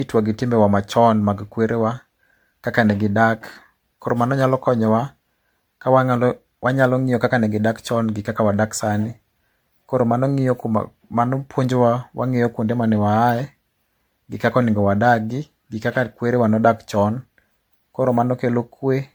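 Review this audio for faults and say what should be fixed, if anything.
Generation loss throughout the speech: swirly, hollow, smeared detail with blurred attacks and nothing above 19.9 kHz, likely from around seven successive MP3 encodes near 97 kbit/s. Keep a lossless master and encode to MP3 only once, at the final step.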